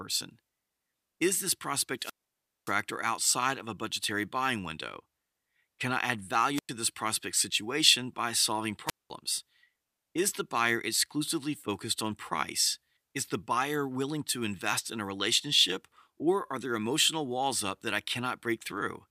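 Speech with three wireless microphone squelch dropouts. The radio signal fades, the receiver's squelch mutes the output, and hiss rises briefly before each hole. The dropouts run from 1.98 to 2.76 s, 6.55 to 6.70 s and 8.86 to 9.11 s, with mutes of 575, 100 and 204 ms.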